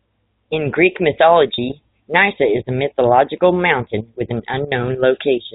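Speech over telephone-band G.711 coding, with packet loss with pitch repetition at 1.54 to 1.58 s. About 40 ms is missing, which fits two 20 ms packets. The gap is bridged by a briefly held, buzzy repeated pitch period rather than silence or a click.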